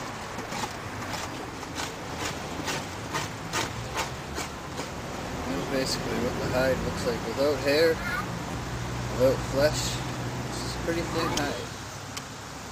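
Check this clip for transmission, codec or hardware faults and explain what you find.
Four brief stutters point to one transmission fault, a repeated buffer. At 2.53 s and 11.33 s a tiny slice sounds twice, and at 5.57 to 5.60 s and 8.51 to 8.53 s it sounds three times, each join hard-edged, giving a click or short buzz. New audio arrived late, so the device replayed its last block of about 11.6 ms, which fits a 512-sample buffer, losing roughly 10 to 20 ms of sound each time.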